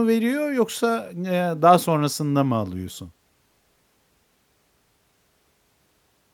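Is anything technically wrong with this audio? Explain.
No, nothing in this speech recording stood out as a technical problem on listening.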